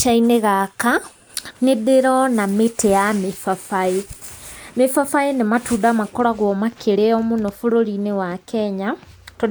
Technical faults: none

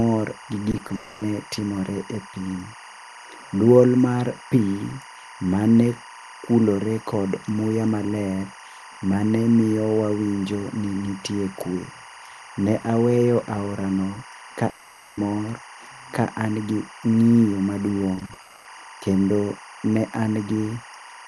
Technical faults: timecode bleed; short concealed packet loss; long network dropout; repeated packet loss (robotic sound)

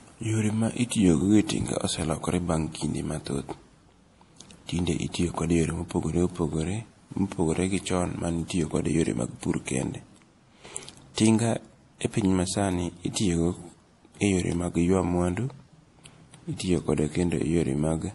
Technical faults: MP3 compression; pre-echo

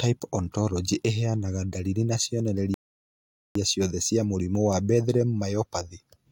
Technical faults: rebuffering stall

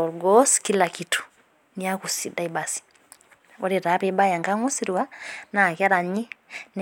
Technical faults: none

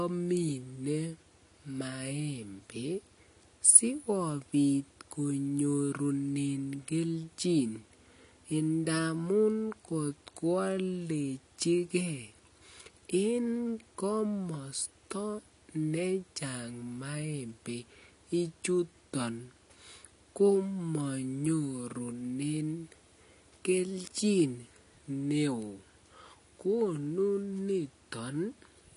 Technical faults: AAC compression

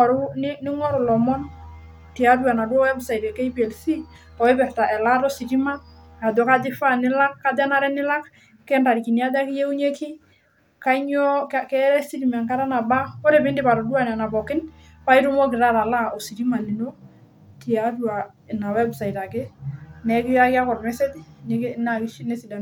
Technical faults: none

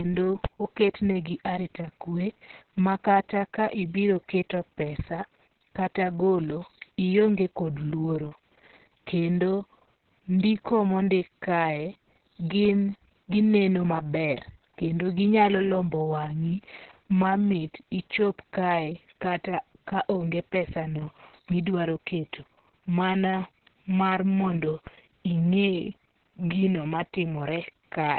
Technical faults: Opus voice compression; DC step

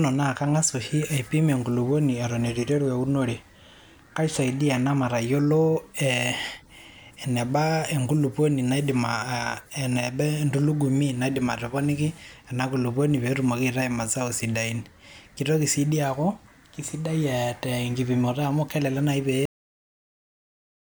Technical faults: cut-off end

